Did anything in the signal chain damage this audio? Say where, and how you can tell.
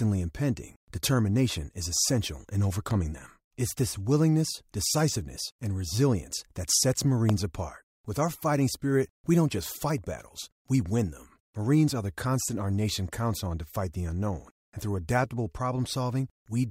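Yes. Analogue wiring: a loud pop at 2.91 s after "determination is essential in", and a far stronger one at 7.29 s, speech continuing underneath, likely voltage transients.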